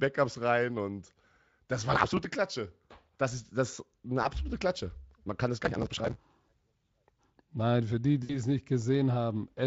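Processor overload crackle, 1.94 to 2.25 s: the processor could not finish its audio buffers on time, and missed deadlines piled up. Each missed buffer was skipped rather than held, leaving short hard-edged holes. The spacing fits buffers of around 5 ms, with dozens lost in a row, so the speech picks up a gritty, tearing crackle that stops once the load eases.

VoIP packet loss concealed by the speech codec, 4.23 to 4.29 s: about 20 ms of audio failed to arrive. The Speex decoder, which is otherwise only lightly colouring the speech, filled the gap by extending its last pitch and spectral shape at falling gain. The result is a brief buzzy smear where the speech thins out.

Processor overload crackle, 5.61 to 6.24 s: the same skipped-buffer tearing returns for a longer stretch of about 0.6 s, pointing to a run of several dozen missed 5 ms deadlines.

VoIP packet loss concealed by the speech codec, 8.23 to 8.40 s: this gap is larger, with about 60 ms lost. 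The extrapolated tone decays audibly into a fading, coloured buzz, and the speech stays weak for a moment after packets resume.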